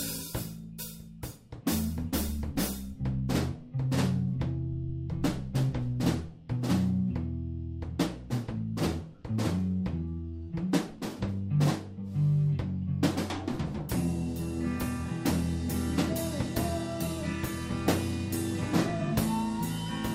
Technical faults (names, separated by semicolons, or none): none